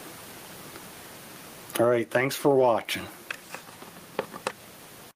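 Gain pumping runs throughout: the gain ducks under each loud sound by around 15 dB, likely from excessive input gain driving a fast limiter.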